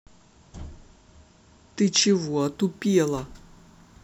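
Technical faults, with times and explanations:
2.41 to 4.04 s, crude rate conversion: samples repeated without filtering, consistent with 44.1 to 48 kHz, adding inharmonic fizz around 30 dB below the speech.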